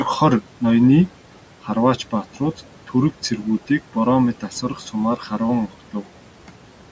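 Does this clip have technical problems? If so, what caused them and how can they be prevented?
Yes. Noise suppressor artifacts run through the whole clip. The room noise sits about 19 dB below the speech, and the suppressor pulls it down by about 12 dB in each frame where it judges a band to be steady noise. As a result the background drops away in the gaps and comes back up under the speech. This can be prevented by using a milder suppression setting, or by reducing the room noise at the microphone so the suppressor has less to remove.

There is also speech cut by the noise suppressor between 4.41 and 4.94 s. Within that stretch, brief portions of the speech, about a tenth of a second in total, are classed as noise and turned down along with the background, with the deepest dip about 10 dB. Those moments sound swallowed or faint compared with the surrounding speech. The call microphone processing is limiting the band, with nothing above 8 kHz, and that part is working as intended. 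This can be prevented by using a less aggressive suppressor, or one that detects speech more reliably, so that quiet parts of the speech are left alone.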